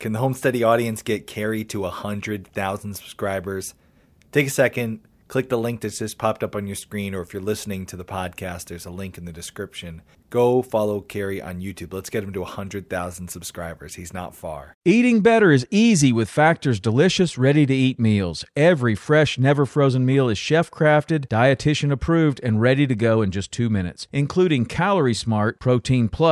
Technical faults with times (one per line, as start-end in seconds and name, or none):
none